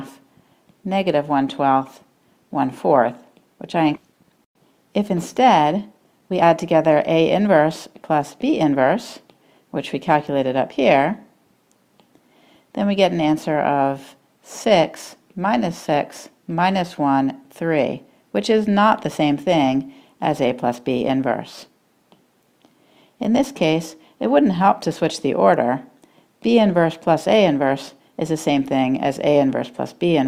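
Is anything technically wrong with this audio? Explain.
Yes. At 3.95 s there is a skip ahead: about a second of queued audio was discarded and playback joins the later material almost directly, with no gap. Jitter buffer speed-up follows at 4.05–4.53 s (109%), 4.98–7.62 s (111%) and 8.11–8.81 s (106%). Short pitch-period pieces are trimmed repeatedly to shed excess buffered delay, so the sound runs faster and hurried at unchanged pitch.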